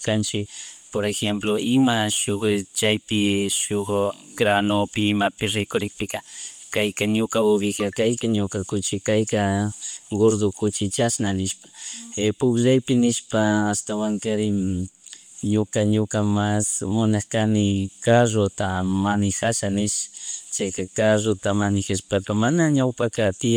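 Right from the start there's a breathy, grainy edge on the speech that runs the whole way through, plainly audible, and it's most likely Bluetooth LC3 compression, with a texture that fits about 48 kbps in 10 ms frames. The codec has thinned out and noise-filled parts of the upper spectrum, though content still reaches up to about 20.1 kHz. At 1.14 s and again at 9.38 s you get a bit error spike: a single sample jumped by a power of two and snapped straight back, so each one is a lone, sharp tick spread across the spectrum and unrelated to the speech.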